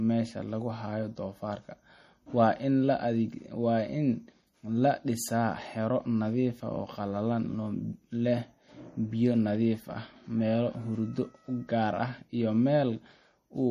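From start to finish the speech carries plainly audible MP3 compression damage, likely from encoding at a bitrate around 40 kbps. Nothing remains above about 15.2 kHz, and the weak spectral detail that survives flickers in and out between frames, giving a watery, swirling texture with metallic chirps on s sounds. That frame-to-frame warbling is what sets it apart from a plain low-pass filter, which would dull the top end without adding any swirl.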